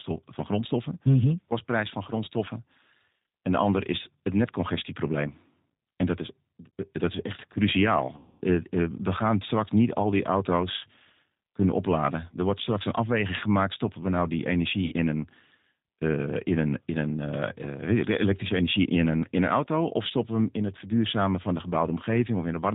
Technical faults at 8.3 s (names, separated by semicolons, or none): G.729 codec; VoIP packet loss concealed by the speech codec